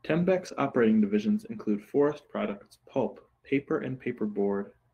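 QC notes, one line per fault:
0.47–0.53 s and 2.43–2.53 s: lost packets rebuilt from error correction. Brief rougher, noisier stretches play with no gap or smeared repeat, because lower-quality backup copies stood in.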